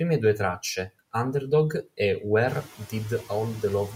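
Noise suppressor artifacts run through the whole speech clip: the background gets pulled down by about 18 dB in the gaps and swells back up under the speech, so it pumps with the talking. That gets easier to hear once the room noise rises about 13 dB around two and a half seconds in.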